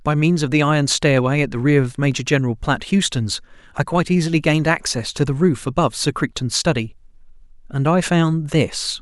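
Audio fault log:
Nothing stood out on listening to the speech.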